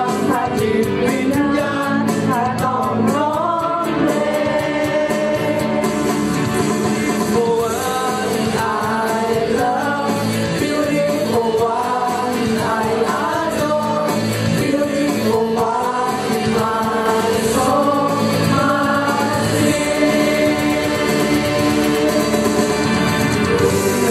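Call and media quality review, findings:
Doubled audio track from 17.06 s to end. Full-band copy roughly 100 ms behind, about equal level, no decay, abrupt onset. Likely a second capture path or misaligned edit.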